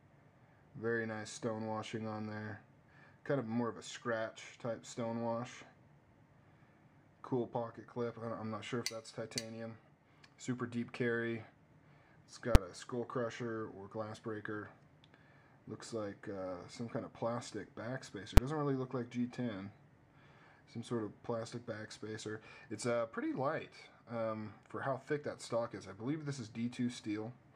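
At 12.55 s there's a sharp bang, and another one just like it at 18.37 s. Both are invalid numbers at full scale. A calculation blew up into infinite or invalid values, and those got pinned to the largest value the format allows. The output sat there for about 6 ms, which fits a 256-sample block. That's too short to hear separate pops at the start and end, so each one lands as a single loud bang.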